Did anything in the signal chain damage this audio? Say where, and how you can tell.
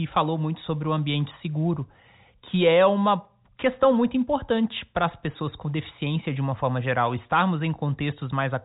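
No, nothing in the chain has damaged this speech: it carries the expected signature of G.711 telephone coding, with the band ending at about 3.8 kHz and at most a faint level-following quantisation hiss, and nothing beyond that.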